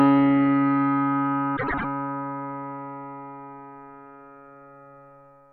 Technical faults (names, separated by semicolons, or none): frames out of order